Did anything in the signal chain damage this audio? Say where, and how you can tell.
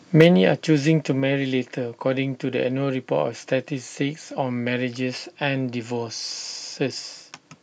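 Yes. Microphone overload at the converter, 0.2 to 0.27 s: the loudest peak crackles harshly, tops flattened about 5 dB over full scale, likely from excessive input gain.

Microphone volume stepped down in call processing at 0.21 s: speech and background fall together by about 4 dB in one step, likely an automatic reaction to the clipping.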